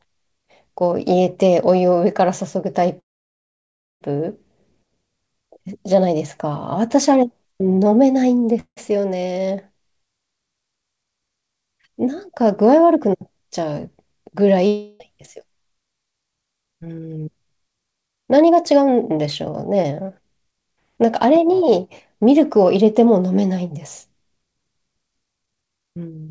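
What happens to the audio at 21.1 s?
Nothing goes wrong at 21.1 s: the speech carries on intact through the WebRTC call path, with the G.722 coding leaving nothing above 8 kHz.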